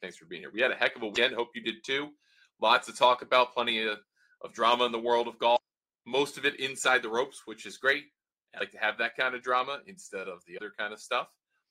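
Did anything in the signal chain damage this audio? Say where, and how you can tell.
Yes. The damage sits at the codec stage, where the compressed stream carries damaged data in two places. At those points the decoder cannot make sense of the frames, loses sync and has to hunt for the next valid frame header before normal decoding resumes. The result is two short, unnatural disruptions, from 1.11 to 1.18 s and from 5.53 to 5.57 s, each lasting under a tenth of a second.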